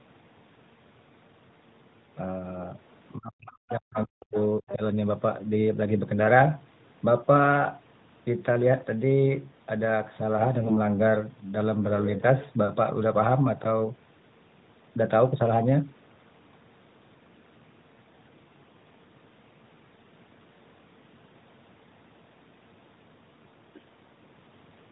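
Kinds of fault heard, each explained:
Speech suppressed in double talk: With both sides talking, the echo canceller likely could not tell the talker from loudspeaker echo and pulled everything down, by about 40 dB at worst, between 3.17 and 4.37 s and again at 4.60 to 4.81 s. The waveform shows sudden deep notches, the spectrogram near-empty gaps.
Other side's voice leaking through: Brief scraps of a second voice likely slip past the echo canceller at 3.70, 3.95 and 4.68 s, each under a tenth of a second and about 15 to 20 dB below the main speech. They appear as faint harmonic fragments inside the suppressed gaps.
AMR bit errors: From 10.60 to 10.77 s, a span in which six 20 ms frames were hit, flipped low-priority bits send the codec's excitation pulses and fine parameters astray. The voice keeps its pitch and level but turns hoarse and gargly, with smeared, noisy harmonics on the spectrogram.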